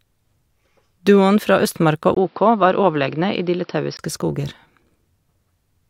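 Speech that turns dull from 2.15 to 3.99 s, likely an input switched to a poorer device, after a 20 ms gap: the spectrogram shows nothing above 5.6 kHz, plus faint new background noise.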